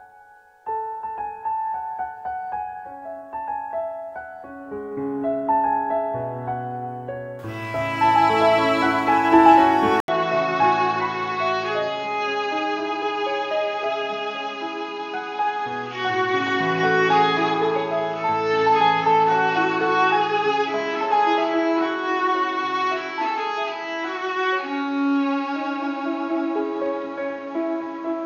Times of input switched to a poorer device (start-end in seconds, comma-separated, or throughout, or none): 10.00-28.26